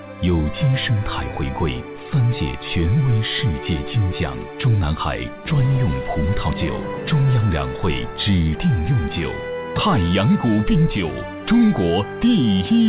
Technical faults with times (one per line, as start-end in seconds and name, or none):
none